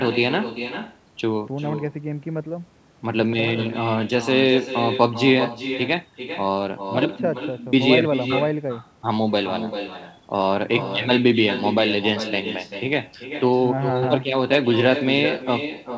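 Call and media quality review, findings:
Echo with no canceller, whole clip: far-end loudspeaker feeding back into its microphone with no echo cancellation, returning speech after the network round trip. Every phrase trails a quieter, thinner copy about 10 dB down, roughly 400 ms late.

Wireless microphone noise hit, 14.52 to 14.57 s: analogue FM radio link fading from multipath cancellation, receiver noise surging up. Brief swish of static, band-limited to 8 kHz like the rest of the G.722 call audio.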